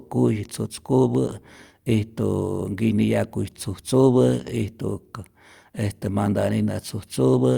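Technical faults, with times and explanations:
No technical faults can be heard anywhere in the clip.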